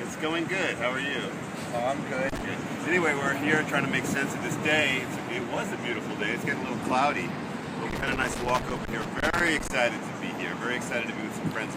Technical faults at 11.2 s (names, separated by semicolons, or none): none